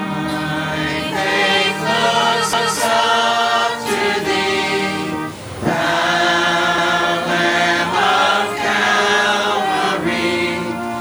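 At 2.53 s and again at 6.78 s, overlapping chunks make a 250 ms stretch of sound play twice, heard as a brief stutter. Each 4 s block begins before the previous one ends. On a waveform or spectrogram, an identical 250 ms pattern appears back to back, with a hard edge at each join.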